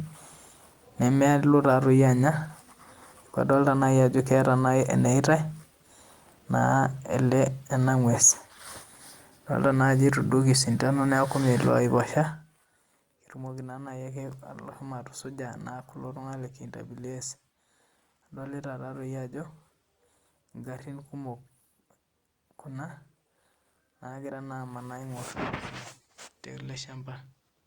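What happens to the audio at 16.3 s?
At 16.3 s the speech plays through intact, with no fault at that moment.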